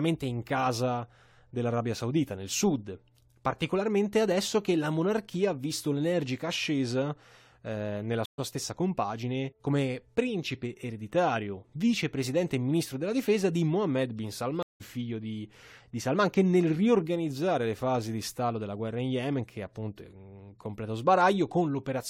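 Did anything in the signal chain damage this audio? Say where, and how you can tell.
Yes, at the network stage: two stream reconnects in this speech. At 8.26–8.40 s, after "l'energica ascesa eh nella", the audio drops to silence for 125 ms and resumes at "stessa compagine come principe" slightly ahead, skipping roughly 70 ms of material. At 14.63–14.82 s a 173 ms gap ends on "figlio di di", about a fifth of a second further on. The connection dropped, the player reconnected and restarted its decoder at the live position, so audio is both missing and skipped.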